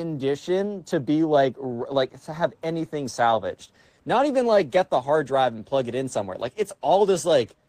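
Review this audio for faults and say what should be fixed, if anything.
No faults found; nothing needs fixing.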